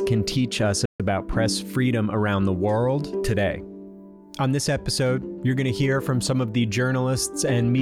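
The sound cuts out abruptly in mid-flow at 0.85 s and stays silent for about 140 ms, then picks up again at 1.00 s. This is a playback stall, most likely the player briefly running short of buffered data or having its output thread held up.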